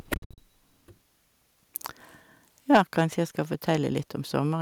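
A speech recording with two bursts of microphone overload, most likely from input volume set too high: peaks are driven about 10 dB past the converter's limit from 0.13 to 0.38 s, flattening most of the waveform into harsh crackle, and about 5 dB over from 2.73 to 3.02 s, where only a small share of peaks clip. At 2.77 s the microphone volume is stepped down, likely by the call software reacting to that clipping, so voice and background drop abruptly by about 3 dB.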